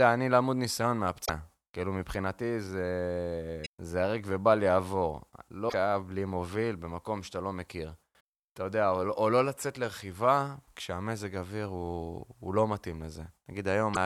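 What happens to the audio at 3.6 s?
At 3.62 to 3.67 s, the compressed stream carries damaged data: some of its bytes are corrupted, so the decoder misreads them, loses sync and hunts for the next valid frame header. The speech breaks into a brief glitch lasting about 46 ms.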